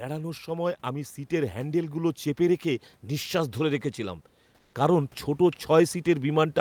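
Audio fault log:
0.05–6.6 s, automatic gain rising: the sound and the room noise beneath it, about 40 dB down, swell together steadily as the gain control keeps raising its gain.
4.55–4.73 s, comfort noise in place of the background: for 180 ms the background turns smooth and featureless at an unchanged level, likely Opus DTX filling a pause with synthetic noise.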